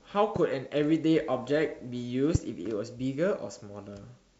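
Loud pops occur at 0.36 to 0.38 s and 2.35 to 2.38 s, each a single sharp click rising well above the speech, the second one louder. A sudden voltage pulse, likely from a switch, plug or static discharge, was added, and the speech continues underneath.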